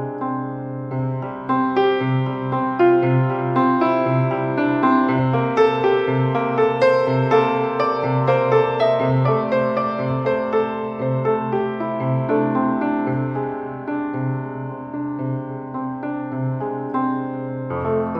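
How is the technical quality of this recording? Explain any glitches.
No technical glitches are audible anywhere in the recording; the signal stays continuous and stable throughout.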